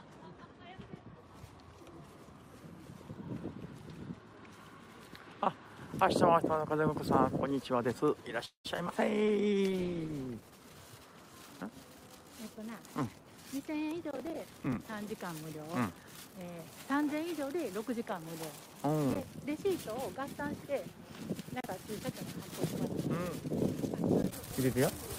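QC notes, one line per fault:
8.45–8.93 s, repeated packet loss (robotic sound): four gaps in under half a second, the longest about 192 ms, so nearly half of this span is concealment rather than received audio. Each hole is bridged by extending the last sound, about 212 ms in all, while around 61 ms simply drops out. Back-to-back patching of this kind leaves the passage choppy, with pieces missing.
9.21–9.62 s, jitter buffer slow-down: right after the losses the receiver was short of buffered audio or had raised its target delay, and stretched what it had, repeating single pitch periods to add about 54 ms. Playback drops to 89% speed with pitch unchanged, so sounds come out drawn-out while the reserve rebuilds.
9.29–10.68 s, call bitrate drop: the bandwidth estimate fell and the encoder went from 64 kbps to 17 kbps, staying at the low rate for about 1.27 s. Coded this coarsely, the audio loses its top end and turns muffled and rough, with a watery edge, until the rate climbs back.
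12.87–14.85 s, jitter buffer speed-up: with too much audio held back, the receiver trimmed short pitch-period pieces over and over, cutting roughly a fifth of a second in total. Playback runs at about 110% speed at the same pitch, so this stretch sounds hurried as the added delay is worked off.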